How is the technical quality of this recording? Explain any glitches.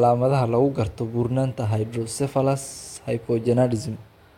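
No technical faults are audible anywhere in the speech recording, so there are no glitches to explain.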